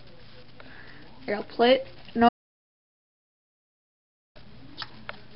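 At 2.29 s the sound cuts off dead and stays gone until 4.35 s, a full 2.07 s audio dropout to silence. There's no room tone in the gap, just silence, so the input was likely lost while recording carried on, and whatever happened there is missing.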